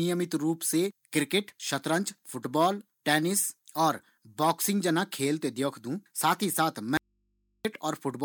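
At 6.97 to 7.65 s, an audio dropout to a faint residue cuts the speech abruptly for 0.67 s, leaving only mains hum far below the speech. It is likely from a lost input connection, and the hard edges rule out a pause or fade.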